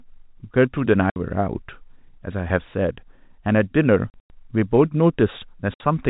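At 1.1 to 1.16 s, 4.1 to 4.3 s and 5.74 to 5.8 s, packet loss filled with silence punches hard-edged holes into the speech, consistent with 20 ms packets. The middle burst drops 140 ms, longest run 100 ms. Waveform and spectrogram show silent gaps with vertical edges across the 4 kHz telephone band.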